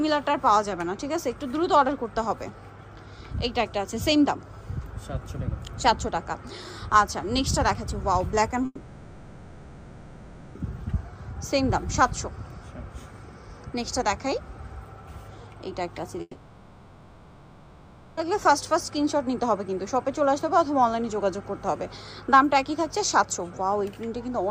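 From 8.65 to 10.57 s, and again from 16.21 to 18.19 s, the sound gives way to a fading buzz and then near silence, likely a long network dropout. About 1.9 s and 2.0 s are lost. The spectrogram shows a smeared tail decaying into an almost empty band, and the waveform flattens before resuming.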